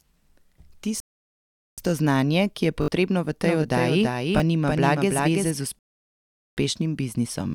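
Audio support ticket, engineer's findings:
Rebuffering stall, 1.00–1.78 s and 5.79–6.57 s: speech cuts to dead silence and then resumes at the exact cut point, with playback picking up on "znanje ki" after the first. Each adds about 0.78 s. On the waveform and spectrogram it shows as a flat, fully blank gap. Client player starved of downloaded data and halted until more arrived.

Repeated buffer, 2.82–2.88 s and 4.38–4.40 s: a click/buzz at the first (one 20 ms segment played 3 extra times) and at the second (1 extra play). The repeat period points to a 20 ms output buffer. Roughly 70 ms and 20 ms of real audio are skipped. On the waveform these appear as identical tiled blocks with hard edges, and on the spectrogram as vertical striping. The output device re-sent its last buffer on an underrun.

Doubled audio track, 3.45–5.51 s: a full-band duplicate of the speech trails about 0.3 s behind at about 5 dB lower, with no reverb tail, and it switches in and out abruptly. 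On the spectrogram the formant pattern appears twice, offset in time. Likely cause: a second, slower capture path mixed in.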